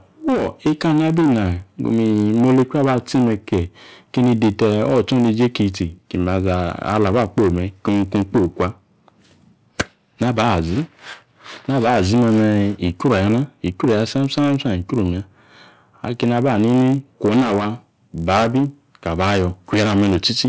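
Throughout, a resampler restarted on every block converts 48 kHz to 16 kHz in 20 ms pieces, leaving an error at each edge: a 50 Hz buzz riding on the speech. The waveform shows tiny steps every 20 ms, and the spectrogram shows evenly spaced vertical striations.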